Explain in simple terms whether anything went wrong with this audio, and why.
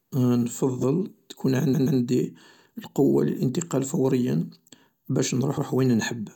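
Twice the speech stutters, jumping back to replay a snippet it has just played. Right after "نفضل تكون", at 1.73 to 1.98 s, a 128 ms piece is heard three times in a row, adding about a quarter second. At 5.57 to 5.67 s a 107 ms piece plays twice. This is repeated frames: a short run of compressed audio was written or sent again, so the player simply played that bit once more.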